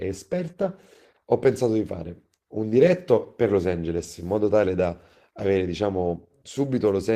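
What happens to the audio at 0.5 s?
Around 0.5 s the speech suffers two network faults in quick succession.

First, a lost packet rebuilt from error correction, from 0.47 to 0.49 s. One packet failed to arrive, but the next packet carried a low-bitrate backup copy of it, and the decoder played that instead. Because the rebuilt stretch is 20 ms, it fits a single lost 20 ms frame. Nothing drops out, but for that instant the speech turns coarser and noisier.

Second, a short concealed packet loss, from 0.51 to 0.55 s. This time about 20 ms of audio never reached the decoder in time, and no backup copy was available. The receiver extended the last sound it had for roughly 15 ms, following its pitch or as shaped noise, before blending back into real audio. This is heard as a brief smear or wobble, and a short consonant falling in that gap may disappear.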